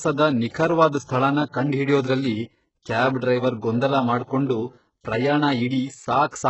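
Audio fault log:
throughout: HE-AAC compression. Treble sounds synthetic and gritty, with s sounds turned metallic or lispy and nothing above 8 kHz. The damage is heavy, likely from HE-AAC at a very low bitrate, near 8 kbps, rebuilding upper bands by copying lower ones upward under a coarse envelope.
0.11 to 6.13 s: clock drift buffer slips. A regular click recurs every 0.60 s, about ten times across this span. Two mismatched clocks, roughly 700 ppm apart, likely let the buffer drift until a small block of around 15 samples is dropped or repeated.
1.05 to 1.08 s: pre-echo. A short hiss leads into an attack, which sounds softened and smeared. The codec spread its quantisation noise over the whole transform block, so noise sized for the loud onset fills the quiet 32 ms before it.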